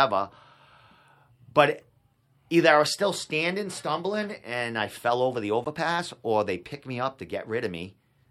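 Corrupt frame decoded at 1.82 s, at 4.27–4.30 s between "I was still standing" and "and I fell over", and at 5.65–5.67 s after "I fell over the": damaged compressed frames were decoded anyway, misplacing energy in frequency as brief blips, each louder than the last.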